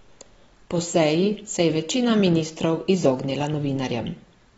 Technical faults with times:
0.00-4.58 AAC compression

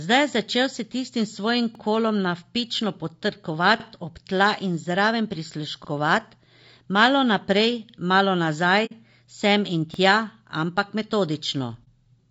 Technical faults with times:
0.00-12.30 low-delay AAC compression
1.75-1.80 overlapping chunks
3.80-3.85 overlapping chunks
5.85-5.90 overlapping chunks
7.90-7.94 overlapping chunks
8.85-8.93 AAC frame loss with muting
9.94-9.99 overlapping chunks
11.84-11.87 AAC frame loss with muting
11.99-12.04 overlapping chunks

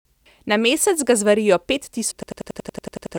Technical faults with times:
0.26 damaged data in a compressed stream
2.11 damaged data in a compressed stream
2.23-3.16 system hang loop

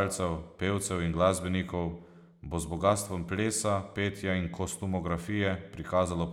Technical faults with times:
none

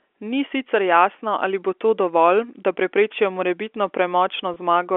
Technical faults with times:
4.54-4.56 packet loss with pitch repetition

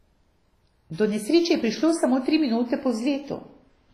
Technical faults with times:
0.00-3.93 WMA compression
0.92-0.98 pre-echo

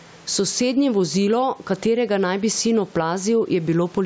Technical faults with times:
0.00-4.05 gain pumping

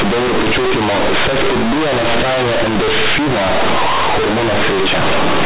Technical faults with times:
0.00-5.46 companded audio read as linear

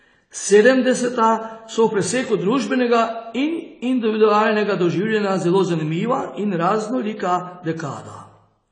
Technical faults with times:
0.00-8.71 AAC compression

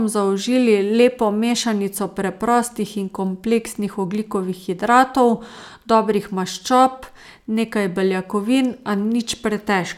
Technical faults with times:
none

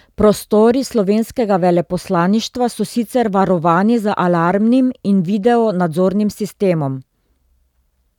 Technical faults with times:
none

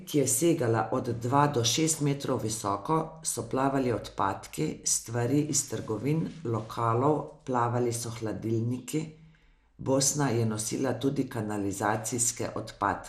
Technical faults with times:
0.00-13.09 MP2 compression

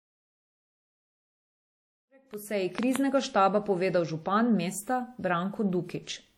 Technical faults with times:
0.00-6.37 WMA compression
2.02-2.97 train of clicks

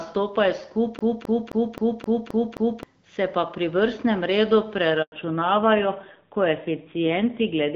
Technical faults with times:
0.99-2.83 CD stuck on one turn
5.02-5.12 handover gap
5.12-7.75 fallback to narrowband

